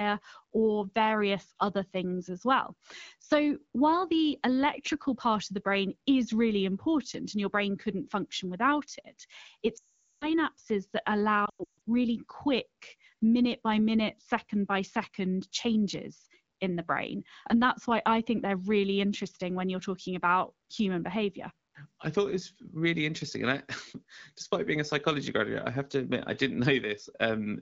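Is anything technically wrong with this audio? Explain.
Yes. Lost AMR speech frames occur at 9.77–10.30 s and 11.45–11.70 s. Corrupted frames made the wideband decoder repeat its last good pitch and vocal tract settings at falling gain. The first gap fades quickly to silence; the second breaks into scattered dropouts, the longest about 140 ms, before speech returns briefly weak or rough.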